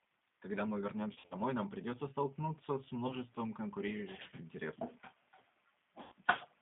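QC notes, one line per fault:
Throughout: G.729 codec. The whole clip is squeezed into a roughly 200 Hz to 3.7 kHz phone band and has that rough, slightly synthetic edge of the 8 kbit/s G.729A coder, which rebuilds speech from a filter, pitch and a few pulses per frame.
1.13–1.36 s, 3.07–3.12 s, 6.03–6.13 s: VoIP packet loss concealed by the speech codec. The decoder papers over gaps by repeating its last pitch and filter at falling gain, so each spot is stretched and fades before recovering. The first comes just before "нам придется столкнуться с" and sounds like about 130 ms lost over 180 ms, in runs up to 50 ms. The second is a brief 20 ms blip between "нам придется столкнуться с" and "конкурирующих интересов". The last is about 90 ms lost.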